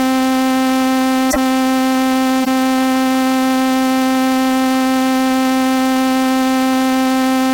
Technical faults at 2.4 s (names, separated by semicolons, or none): corrupt frame decoded